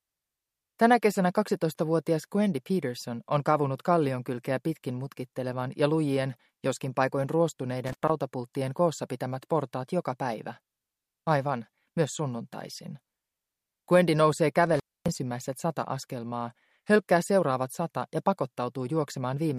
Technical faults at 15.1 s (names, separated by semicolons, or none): intermittent contact